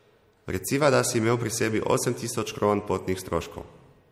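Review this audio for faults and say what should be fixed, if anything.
Throughout, the speech has plainly audible watery smearing, and a spectrogram shows a hard ceiling at 16.6 kHz with flickering gaps, likely MP3 compression at a low bitrate around 64 kbps. To prevent it, keep an uncompressed or higher-bitrate master.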